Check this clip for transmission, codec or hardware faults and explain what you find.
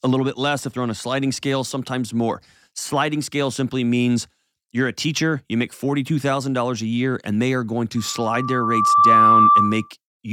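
Loudspeaker feedback squeal, 7.97 to 9.91 s, right after "and they are going": the microphone re-captures its own loudspeaker, and a 1.2 kHz tone swells over about a second to roughly 10 dB above the speech.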